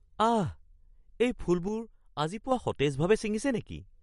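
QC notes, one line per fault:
Throughout, MP3 compression: likely a starved MP3 encoder, consistent with about 48 kbps, cutting all treble above 11.2 kHz and dropping weak spectral lines frame by frame. The speech sounds dull and watery, with plainly audible swirling and chirpy sibilants.
1.68 to 2.52 s, one channel drops out: one stereo channel is lost, likely from a dropped feed or connection, so the mono sum carries only half the shared signal. The speech abruptly falls about 6 dB, then jumps back when the channel returns.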